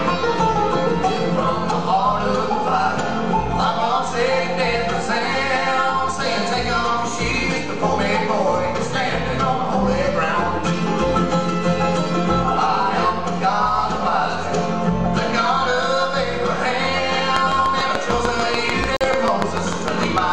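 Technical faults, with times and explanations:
17.36–20.19 s, train of clicks: about twenty evenly spaced pops at 6.75 per second, roughly 20 dB above the sound, likely from electrical interference or a faulty connection.
18.97–19.06 s, corrupt frame muted: an abrupt 94 ms silence, consistent with two damaged compressed frames rejected by the decoder and replaced with silence, with timing kept intact.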